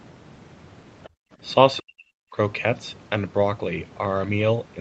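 Speech recorded through a call's microphone processing, which stops at 8 kHz as expected, and there are three echo-canceller problems packed into the first couple of seconds. From 1.03 to 1.09 s there's a faint scrap of a second voice, well down, something like 25 dB under the talker, most likely the other side's voice leaking through, where the far end played on the loudspeaker and the canceller didn't scrub it all out of the mic. Right after, from 1.09 to 1.37 s, the room tone ducks hard, about 36 dB at its deepest and for roughly a fifth of a second in total. That's background gated by the echo canceller, clamping the mic down while the loudspeaker was active and then releasing so the ambience comes back. Then between 1.79 and 2.36 s the talker's own voice dips and breaks up in pieces, dropping by something like 40 dB at worst across a little under half a second of affected audio. That pattern is likely speech suppressed in double talk: both ends were talking at once, the canceller couldn't tell the talker from the loudspeaker echo, and it pulled the whole signal down, taking the near-end voice with it.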